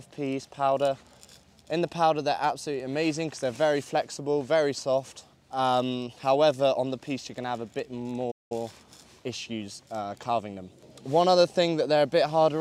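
At 8.31 s the sound cuts out abruptly in mid-flow and stays silent until 8.52 s, a gap of about 193 ms, before carrying on. This is a playback stall: the output path had nothing to play for that interval. The likely cause is the player's buffer running dry, or its playback thread being held up, so no samples reached the output until it recovered.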